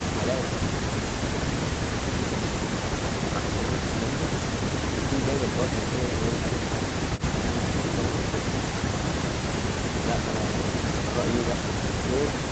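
No technical faults are audible.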